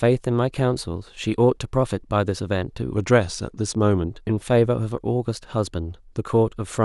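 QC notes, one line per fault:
2.92–4.09 s, drift correction step: speech slows 6.2% and drops 110 cents together, then snaps back, likely a clock-sync resampler stepping its rate.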